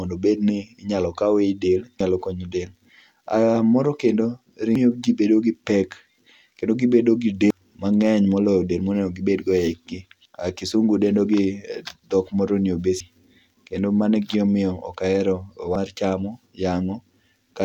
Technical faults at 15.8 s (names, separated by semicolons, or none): audio missing between chunks